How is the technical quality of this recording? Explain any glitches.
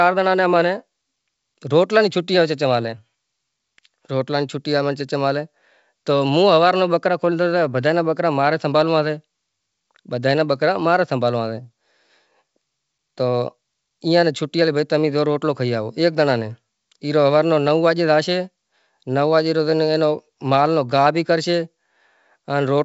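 Nothing stood out on listening to this speech recording, which comes over a G.722 wideband telephone link at 64 kbit/s with content reaching up to about 7.7 kHz.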